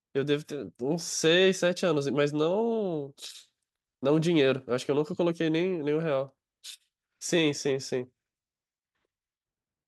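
No technical faults occur at any point in the speech.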